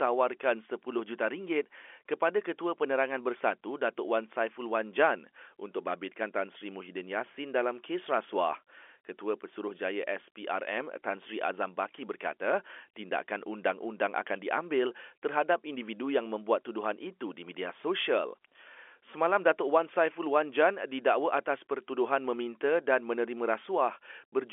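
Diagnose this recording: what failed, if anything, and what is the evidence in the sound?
Nothing stood out on listening to this speech recording: the narrow band of the G.711 telephone line can be heard, as that path would give, and no failure at any stage is evident in the sound.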